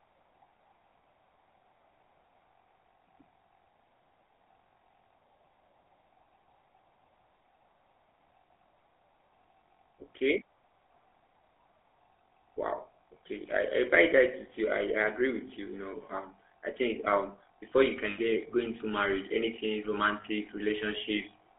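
From the start, the speech carries the buzzy, gravelly roughness of the GSM full-rate codec. Its excitation is built from regularly spaced pulses with most samples discarded, which gives a coarse rasp rather than the watery, swirling smear of a modern low-bitrate codec. The damage is plainly audible and fits the 13 kbps full-rate coder. The band runs from about 300 Hz to 3.5 kHz, so the sound is thin with no low end or air.

Between 18.1 and 18.19 s, after "think um before you" and before "get go into marriage", about 80 ms of lost GSM frames are concealed by repeating the last good frame. The result is a brief metallic, ringing hold instead of the hard dropout or click of a plain gap. A shorter ring of the same kind follows at 20.22 to 20.25 s, right after "go into marriage anything", pointing to a single lost frame.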